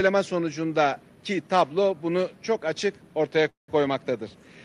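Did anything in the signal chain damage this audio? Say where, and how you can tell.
Yes, a call audio freeze between 3.49 and 3.71 s, at the network stage. The sound trails off into a fading fill, mostly silence, then resumes where it stopped with nothing lost, about 189 ms late. Likely delayed packets emptied the jitter buffer.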